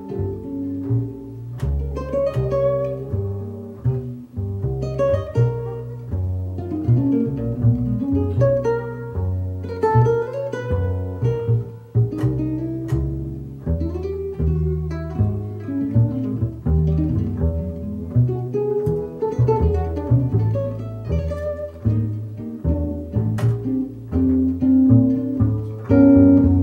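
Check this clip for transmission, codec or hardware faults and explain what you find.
No transmission, codec or hardware faults turn up anywhere in this clip.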